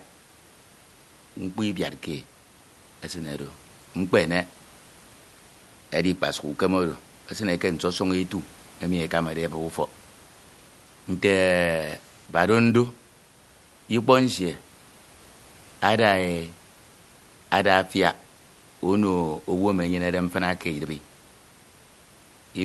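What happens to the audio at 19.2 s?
At 19.2 s the audio is intact, with only the room noise well below the speech and the call path's normal coding, with no dropout, glitch or distortion at that moment.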